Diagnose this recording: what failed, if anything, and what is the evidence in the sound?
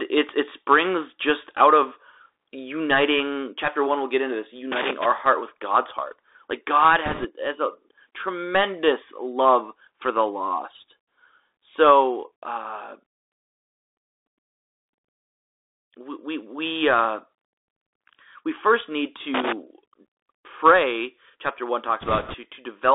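The whole clip sounds narrow and grainy. Nothing comes through above about 3.7 kHz or below 300 Hz, s sounds are scratchy, and a granular hiss sits under the speech. This is the codec stage, the Bluetooth CVSD headset codec, which fits a 64 kbps one-bit stream. Its adaptive up/down steps cannot keep pace with fast, loud high-frequency movement.

Irregular bursts of scratchy crackle break up the speech from 4.72 to 5.06 s and again from 19.34 to 19.52 s. This is loose connector crackle in the analogue wiring. A worn or dirty contact makes and breaks as it shifts, chopping the signal in rapid, uneven bursts.

From 7.06 to 7.26 s and from 22.01 to 22.36 s, a rushing, crackly noise spreads over the speech without any sharp clicks. These are bit errors on a Bluetooth voice link, roughly a few percent of bits flipped. Each CVSD bit moves the output by only one small step, so the damage smears into noise rather than spikes.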